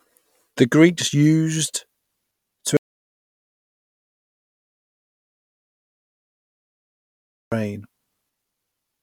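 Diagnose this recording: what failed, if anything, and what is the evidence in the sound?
Audio dropout to silence, 2.77 to 7.52 s. Speech cuts to silence, no room tone. Likely a lost analogue input connection.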